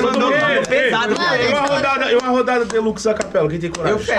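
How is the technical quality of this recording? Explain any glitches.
No glitches can be heard in this recording. Nothing in the audio calls for explanation.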